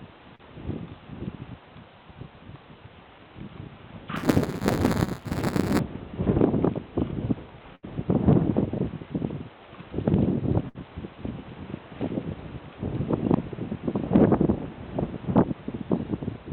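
Short concealed packet loss at 0.35 to 0.41 s: about 40 ms of audio arrived too late to decode, and the receiver bridged it with 38 ms of sound extrapolated from what came just before, then crossfaded back. The result is a brief smear or wobble.

Buffer tearing from 4.16 to 5.79 s: the writing and reading sides of a ring buffer have drifted so they cross inside each period. That leaves a small slice of every buffer holding audio roughly a hundredth of a second stale, bounded by hard joins. The result is a rattling buzz at 188 Hz, which fits a 256-sample buffer.

Burst of packet loss at 7.75 to 7.85 s and again at 10.69 to 10.77 s: runs of packets went missing, 80 ms and then 60 ms. Concealment stretched the last sound across 75 and 59 ms while fading it, so each gap is a held, dwindling buzz or hiss before the audio resumes with that stretch gone.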